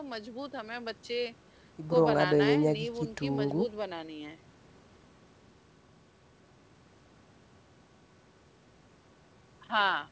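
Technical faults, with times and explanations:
No technical faults are present in the speech, which carries the ordinary band limit of a call path, with nothing above 8 kHz, as expected from normal call microphone processing and a G.722 wideband codec on a WebRTC call path.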